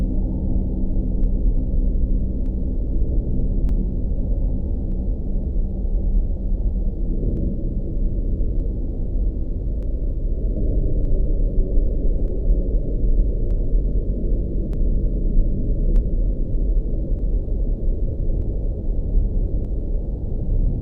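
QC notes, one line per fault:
1.24–19.65 s, clock drift buffer slips: a click recurs every 1.23 s, about fifteen in all, likely from two unsynchronised clocks drifting a few hundred ppm apart, each slip dropping or repeating a short block of samples. Waveform shows tiny discontinuities; spectrogram shows evenly spaced thin vertical broadband lines.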